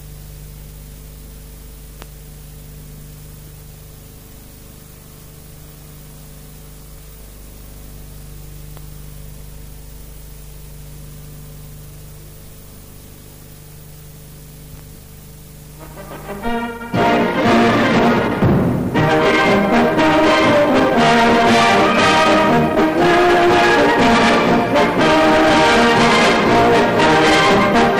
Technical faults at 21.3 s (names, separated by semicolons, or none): hard clipping